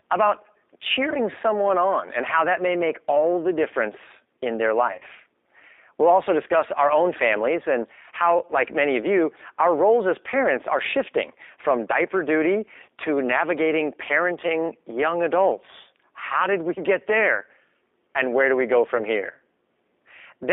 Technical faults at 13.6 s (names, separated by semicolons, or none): G.729 codec